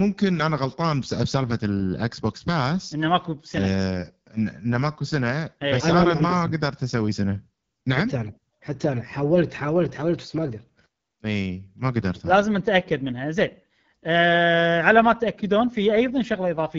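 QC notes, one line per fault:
Throughout: AMR wideband (HD Voice) codec. The speech sounds rough and raspy. The damage is plainly audible. The codec models the voice up to 6.4 kHz from a vocal tract filter driven by sparse pulses. The top band up to 7 kHz is filled with shaped noise. The roughness points to about 8.85 kbit/s, one of the two lowest rates. That is too few bits to capture the voice's fine detail.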